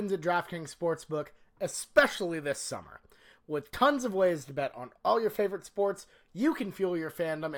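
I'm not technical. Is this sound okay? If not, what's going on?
No. The clock timing each sample wobbles by around a millionth of a second, so the speech is captured slightly early or late at random. This sample clock jitter adds a faint hiss or roughness throughout, strongest on loud, sharp sounds.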